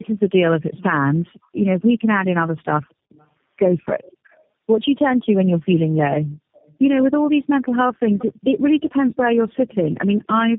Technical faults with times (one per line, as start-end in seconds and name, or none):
0.00-10.59 tandem speech coding
1.37-1.55 background gated by the echo canceller
2.89-3.26 echo leak
2.94-3.12 background gated by the echo canceller
6.53-6.74 echo leak
10.03-10.17 background gated by the echo canceller